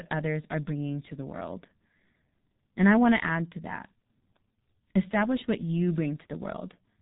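G.723.1 codec damage runs through the whole speech clip: nothing survives above 3.8 kHz, so the voice is muffled, and the slowly updated 30 ms frames of its voice model leave it hoarse with smeared consonants, heavy coding that fits a rate near 6.3 kbit/s.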